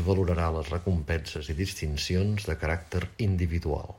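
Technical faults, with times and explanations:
1.37–1.49 s, sudden gain jump: a gain change, likely applied without a ramp, drops the speech and its background noise together by about 6 dB, then restores them abruptly.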